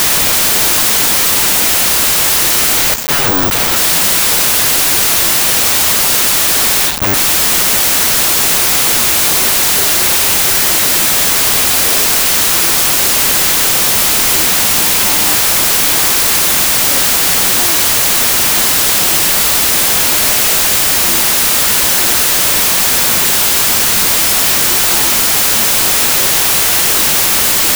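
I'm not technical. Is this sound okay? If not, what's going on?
No. The whole clip has a wrong sample width fault. The audio was saved in one number format but played back as another, which fits 32-bit audio being read as 16-bit. The speech is buried under loud noise. It also runs at half speed, so it sounds much deeper.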